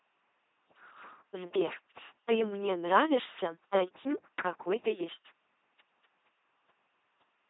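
Right through the speech there's heavy LPC-10 vocoder damage: every sound is forced into buzz or hiss, giving that mechanical robot quality, with nothing above 3.8 kHz, which fits a 2.4 kbit/s stream.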